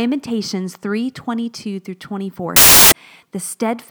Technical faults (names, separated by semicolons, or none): samples built from the wrong bytes